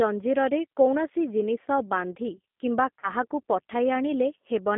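Speech squeezed through the G.729 codec at 8 kbit/s: everything sits between about 200 Hz and 3.5 kHz, with a plainly rough, synthetic edge throughout. Around 2.99 to 3.11 s there's VoIP packet loss concealed by the speech codec, about 40 ms missing (which fits two lost packets), so the decoder stretches the last sound into a fading tail that stays weak briefly afterward.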